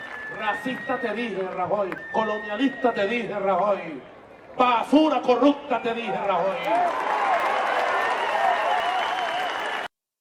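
At 1.98, 4.84, 7.4, 8.8 and 9.6 s there's a small jump forward in the sound, each skipping about 20 ms, and the last one closer to 70 ms. That's likely a dropped buffer (overrun), with unread samples overwritten and the edges spliced straight together.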